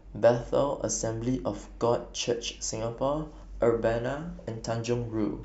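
No technical faults can be heard anywhere in this speech recording.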